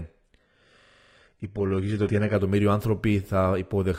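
Speech, opening dull and muffled: from 0.00 to 2.34 s nothing is present above 11.7 kHz and codec artefacts are stronger, then clarity improves abruptly with no gap. This is an adaptive stream starting at a low bitrate, which points to HE-AAC at 16 kbit/s stepping up to AAC-LC at 96 kbit/s once the connection was measured. Within that stretch, from 0.81 to 1.15 s, one 42.67 ms fragment repeats exactly eight times, a rapid mechanical repetition at 23.4 Hz with essentially no audio lost. That is a system hang loop: the system froze while the audio hardware kept cycling the same ring buffer, which fits a 2048-sample buffer.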